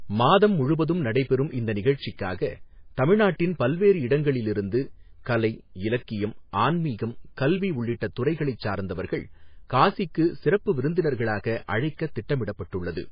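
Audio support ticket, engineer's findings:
Speech band-limited throughout, nothing above 5 kHz; sibilants dull, heavy watery swirl. Likely MP3 compression at a very low bitrate, roughly 19 kbps. Encoder starved of bits: treble cut fixed at 5 kHz, weak frequency lines dropping in and out frame to frame, consonant attacks smeared.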